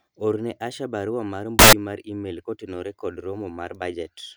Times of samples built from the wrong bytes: 1.59-1.73

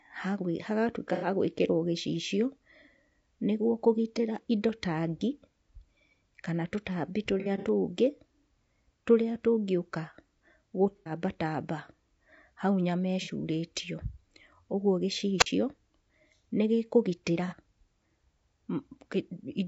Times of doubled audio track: none

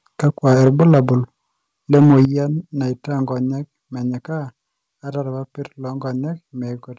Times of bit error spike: none

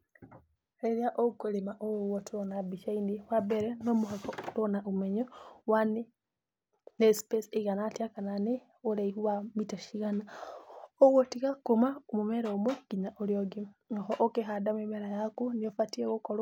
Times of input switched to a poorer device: none

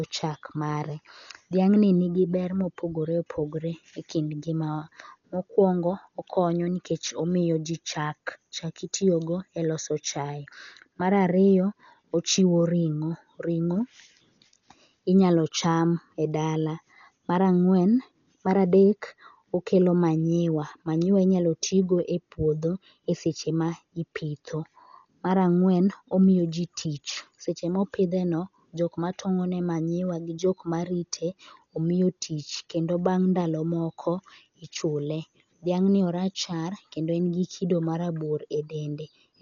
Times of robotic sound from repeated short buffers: none

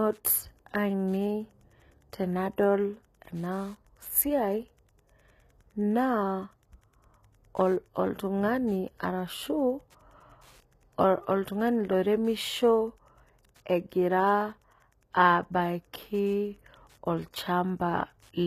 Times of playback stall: none

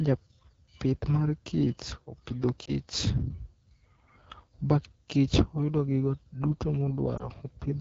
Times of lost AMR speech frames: 2.65-2.72, 7.17-7.29

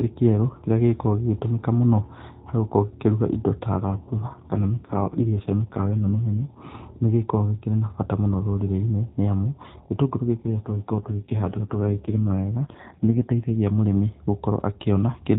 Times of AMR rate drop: 3.78-6.59, 10.46-13.56

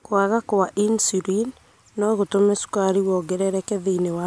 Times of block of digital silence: none

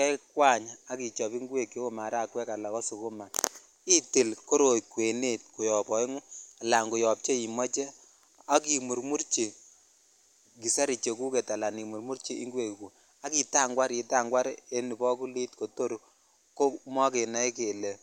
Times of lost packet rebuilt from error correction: none

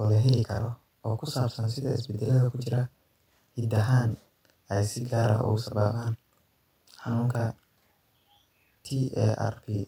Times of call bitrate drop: none

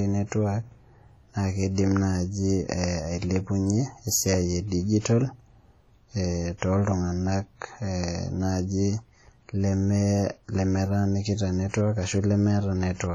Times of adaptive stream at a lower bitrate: none

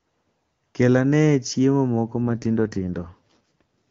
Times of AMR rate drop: 2.28-3.62

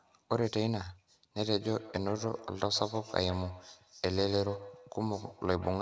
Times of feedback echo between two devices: 1.60-5.82

